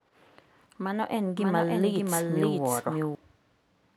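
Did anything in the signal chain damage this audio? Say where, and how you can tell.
Yes. From 1.37 s to 3.15 s the speech has a doubled audio track: a second, full-band copy runs around half a second behind, roughly as loud as the original, with no decay or room colouring. It starts and stops abruptly at those times. On a spectrogram the harmonic patterns repeat as an identical shifted pattern; the waveform shows overlapping envelopes. The cause is likely a second, slower capture path or a misaligned edit.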